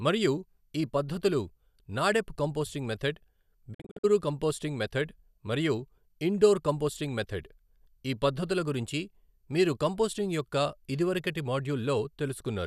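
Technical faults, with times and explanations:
3.73–4.05 s, digital broadcast dropout: after "పద్ధతులు నాడెప్ కంపోస్టింగ్ మెధడ్" the speech breaks into short silent holes totalling 192 ms across 288 ms, none longer than 48 ms, each with a 20 ms fade. The receiver muted corrupted frames, pointing to roughly eight lost, and resumed before "కంపోస్టింగ్ మెధడ్ మరియు ఇండోర్".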